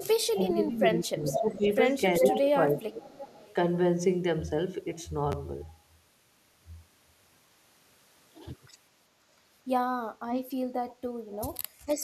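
From 0.0 to 0.51 s, 0.83 to 2.33 s and 2.77 to 3.55 s there is echo leak: a copy of the speech returns about 0.4 s late, likely from a far-end loudspeaker that the echo canceller did not fully cancel. It ranges from faint to as loud as the speech itself. The fixed lag tells it apart from room reverberation, which smears sound continuously rather than repeating it.

Overlapping this, from 0.31 to 1.67 s and 2.21 to 3.14 s, the speech is suppressed in double talk. It dips by roughly 15 to 20 dB in broken patches, likely because the canceller ducked the local talker along with the echo.

Short, quiet echo scraps return at 10.31 to 10.36 s, 10.89 to 10.95 s and 11.33 to 11.59 s.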